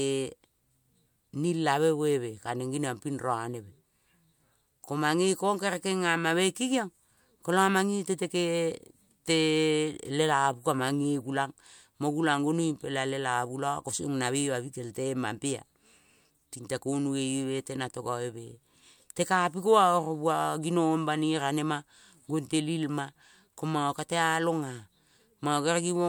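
No technical faults are audible.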